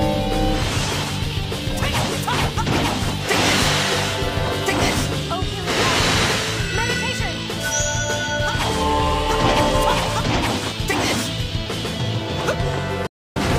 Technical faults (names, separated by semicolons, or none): digital broadcast dropout